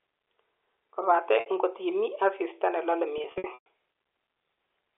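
Packet loss with pitch repetition hits this speech at 1.40 s, just before "ngot imii asista ne", where about 60 ms goes missing and is bridged by a briefly held, buzzy repeat of the last pitch cycle. From 3.18 to 3.66 s, after "imii asista ne lole", about 260 ms is lost in scattered gaps, the longest 120 ms, so the repeats fade toward silence before the speech cross-fades back. The narrow telephone band of the G.711 line can be heard throughout.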